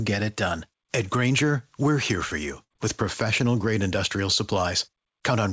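All the way through, there's gain pumping: the background swells up between loud moments and ducks by about 5 dB under each one, squashing the dynamics. The likely cause is input gain set far too hot with a fast limiter clamping down on every peak.

At 2.64 to 2.72 s there's a burst of packet loss. The receiver stretches the last bit of sound for about 62 ms, fading it into a held buzz or hiss, then jumps ahead with roughly 60 ms of the speech simply gone. The band stops at 8 kHz, which fits a G.722 call link.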